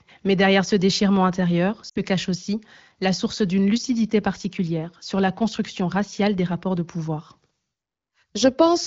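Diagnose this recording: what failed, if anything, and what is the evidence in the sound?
Lost AMR speech frames at 1.89 to 2.00 s, a network-stage fault. The speech briefly smears into a held tone that sags in level, then returns weak or rough for a moment. This fits a run of about three 20 ms frames corrupted on the radio link and failing their checksum. The AMR-WB decoder, whose light coding texture fits a rate near 15.85 kbit/s, concealed the loss by repeating the last good pitch and vocal tract settings with falling gain.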